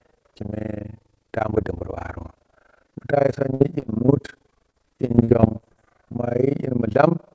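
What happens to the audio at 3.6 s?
At 3.6 s the audio is inside a burst of repeated packet loss (robotic sound) that runs from about 3.54 s to 4.10 s. Four gaps fall in that half-second, totalling 120 ms of missing audio, and the longest is 61 ms. Each hole is patched by stretching the sound just before it, so about 118 ms, roughly 21% of the span, is concealment. The result is choppy, robotic audio with pieces missing. On a waveform the patches show as short runs of near-identical repeated cycles. On a spectrogram they appear as blocks of frozen, smeared harmonics.

Running under this, as through the whole clip, is overlap-add ripple. Frames were rejoined with an overlap that doesn't sum to a constant gain, so the level dips and recovers once per frame, around 30 times a second, with a depth of about 60 dB. The ear hears that as a fast flutter or rough tremolo. A spectrogram shows regular vertical striping at that rate, and the waveform envelope is scalloped into evenly spaced notches.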